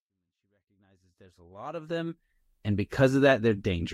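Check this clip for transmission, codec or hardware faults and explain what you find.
Nothing stood out on listening; the level rises smoothly from the very beginning over the first 2.4 s, the way an editor would fade it in, with no click or hard edge.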